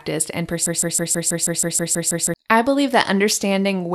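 From 0.66 s to 2.34 s the speech locks into a broken-record loop: a fragment of about 0.16 s repeats exactly, back to back, ten times, giving a rapid stutter before normal speech resumes with "I believe". The likely cause is a stalled player or stream that kept resending the last fragment it held, so the audio due in that span is lost. On a waveform and spectrogram the stretch shows as identical blocks tiled at a regular 0.16 s spacing.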